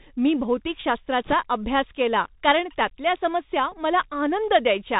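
Throughout, the speech sounds narrow and boxy, with scratchy s sounds, roughness on loud bright moments, and a fine granular hiss underneath. This is the Bluetooth CVSD headset codec, which fits a 64 kbit/s one-bit stream: nothing above 4 kHz survives, and its adaptive step lags fast high-frequency changes.

From 1.25 to 1.34 s, a brief rushing crackle sits over the speech without any sharp clicks. These are bit errors on a Bluetooth voice link, at a rate of a few percent. Each flipped bit nudges the waveform only slightly before the error fades, so the damage is diffuse noise rather than loud pops.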